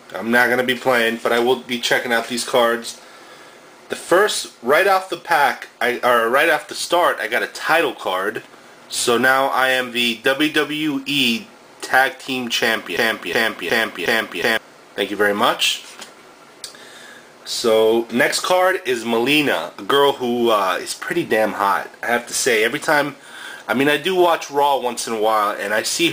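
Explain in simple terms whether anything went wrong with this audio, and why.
A broken-record loop runs from 12.97 to 14.57 seconds, where a 0.36-second fragment plays four times back to back. The player or stream likely stalled and kept resending its last piece, so the audio meant for that stretch is missing.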